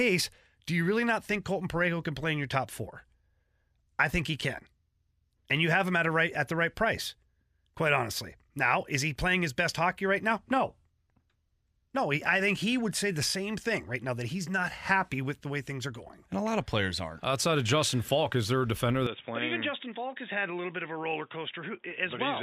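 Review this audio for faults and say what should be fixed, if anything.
At 19.07 s, right after "is there a defender", the sound turns dull and boxy through to the end at 22.42 s: nothing above 3.8 kHz, a level drop of roughly 5 dB, and a faint new background noise well below the signal, with no gap at the change. This is likely an input switched to a poorer device, with the system jumping to another microphone or a headset's narrowband call profile. To prevent it, lock the recording input to one device and disable automatic device switching.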